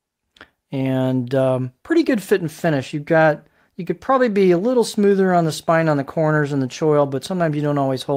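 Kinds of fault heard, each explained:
Nothing stood out on listening; no problem with the audio could be heard at any point.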